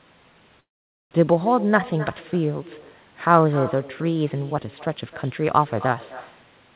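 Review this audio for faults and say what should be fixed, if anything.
Echo with no canceller runs throughout: every phrase returns about a third of a second later, about 17 dB quieter, as a distinct repeat rather than a smooth room-reverb tail.

A call audio freeze spans 0.6 to 1.13 s: a brief held buzz fades into roughly half a second of silence, then speech resumes where it stopped. That makes it a likely network delay, not a dropout, since nothing is lost. The narrowband call path leaves nothing above 4 kHz.

Enable acoustic echo cancellation on the far end and give the jitter buffer enough headroom to ride out delay spikes of this size.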